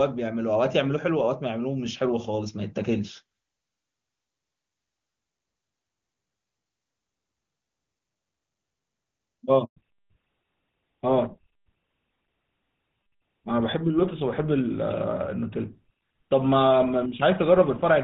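At 9.64 s the speech cuts out abruptly and stays silent for 120 ms, until 9.76 s. This is a handover gap: the call was passed from one network to another, no speech frames arrived during the switch, and whatever was said in that window is lost.

From 9.76 s to the end, the speech sounds duller and rougher, with everything above 4 kHz gone. This is a fallback to narrowband. Before the gap, the clearer wideband sound fits HD Voice at a high rate, around 23.85 kbit/s. After it, the call dropped to an older narrowband codec, consistent with GSM full rate.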